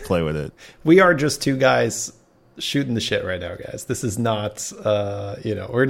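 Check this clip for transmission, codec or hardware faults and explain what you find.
Nothing faulty can be heard anywhere in this speech.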